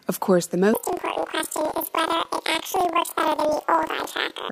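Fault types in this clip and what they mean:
Planar audio read as interleaved: From 0.74 s, just after "course the", the speech jumps an octave high and picks up a steady flutter until the end. The channel data is stored as a block of left samples followed by a block of right samples, but it is read as alternating left-right pairs. Each block of about 43 ms, which fits a 2048-sample block, plays twice at double speed, first left then right. That repetition gives a flutter at about 23.4 Hz while the overall pace stays normal.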